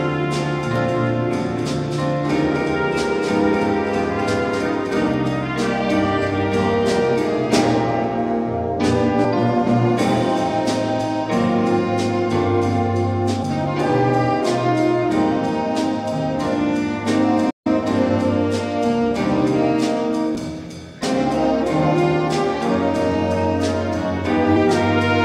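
From 0.76 to 5.14 s there's a doubled audio track: a clean copy roughly a third of a second behind, a few dB quieter, likely from a second, slower capture path. It starts and stops abruptly. Then come brief glitches from damaged data in the compressed stream at 9.24 and 13.42 s, where the decoder loses sync. At 17.50 s a playback stall drops the sound for about 149 ms, likely the player running dry, before it resumes. More of those corrupted-data blips follow at 20.35 and 24.55 s.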